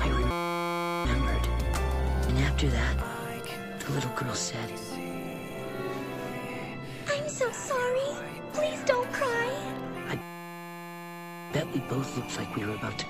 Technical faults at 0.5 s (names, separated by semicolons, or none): system hang loop